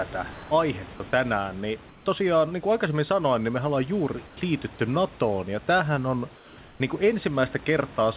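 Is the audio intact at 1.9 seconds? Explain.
No. From 1.89 to 2.06 s the real room background is replaced by a steady, featureless hiss about 2 dB quieter, lasting 170 ms. The cause is likely comfort noise in place of the background: transmission paused during silence, and the receiver synthesised roughly matched noise.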